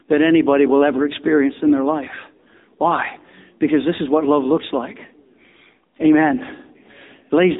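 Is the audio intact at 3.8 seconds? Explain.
No, the AMR narrowband mobile codec runs throughout: nothing above 3.8 kHz, with buzzy, synthetic vocal-tract coding pointing to a low bitrate near 8 kbps, unlike plain low-pass muffling.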